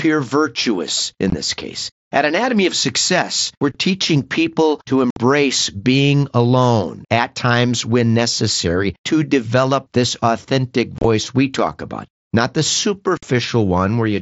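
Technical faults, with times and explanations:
1.30, 3.72, 5.10, 10.98 and 13.17 s, unconcealed Bluetooth headset packet loss: abrupt holes of 20 to 60 ms, as lost headset packets became silence.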